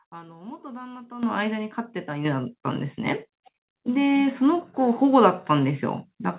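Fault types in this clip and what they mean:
Microphone volume stepped up: the call software judged the microphone input too quiet and raised the device's input gain in abrupt single steps instead of a gradual ramp, first by about 10 dB at 1.23 s and then by about 6 dB more at 2.25 s. Each step lifts the speech and the background noise together, so the whole sound jumps louder, heard through the call path's narrow band with nothing above 4 kHz.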